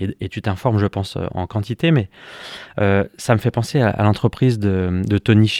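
Speech recording with no audible technical faults anywhere in it.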